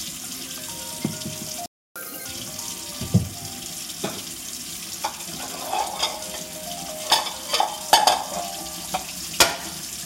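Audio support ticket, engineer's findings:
Playback stall at 1.66 s to 1.96 s: sound just drops out mid-flow for roughly 300 ms, dead silence, then resumes. Probable component is the player's output buffer. Likely cause is the buffer running dry or the playback thread getting blocked, so nothing reached the output until it recovered.

Catch-up at higher speed at 1.96 s to 2.25 s: right after the gap, the audio runs at double speed with pitch jumped up about ten semitones, chipmunk-style. That's the player resampling its backlog to win back the lost time.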